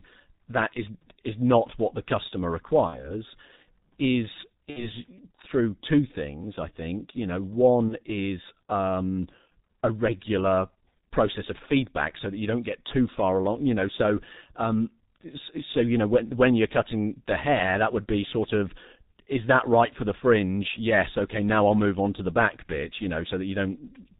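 Speech, and the whole thing runs through what sounds like the G.723.1 codec, likely at its 6.3 kbit/s rate: nothing above 4 kHz, so it's muffled and a bit hoarse, consonants smeared, and the slow-updating voice model makes everything feel heavily squashed. There's also VoIP packet loss concealed by the speech codec at 2.87–3.13 s, 4.70–4.90 s and 7.89–7.97 s. The decoder fills each gap by stretching the last bit of voice into a fading buzzy tone or coloured noise, and the voice stays weak or distorted for a moment after each gap. The first two gaps fit roughly 60 ms of missing audio, the third about 30 ms.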